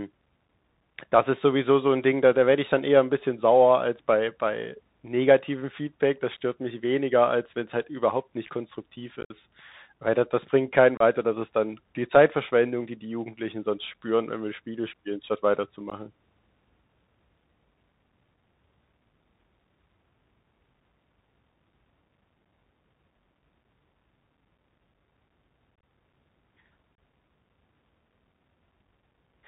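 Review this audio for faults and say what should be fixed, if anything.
Bluetooth CVSD headset codec, throughout: one-bit delta coding, consistent with a 64 kbps CVSD link, leaves a hard ceiling at 4 kHz on the spectrogram, with grainy hiss and scratchy s sounds. Switch the headset to a wideband link such as mSBC or LC3.

Unconcealed Bluetooth headset packet loss at 9.21–9.32 s after "halt überhaupt nicht konstruktiv", 10.97–11.02 s after "da das bringt keinen", 15.90–15.92 s after "spielen statt", 25.76–25.83 s and 26.95–26.98 s. Lost packets became silence or an idle pattern, showing as vertical strips with abrupt waveform edges. Reduce radio interference and enable packet loss concealment.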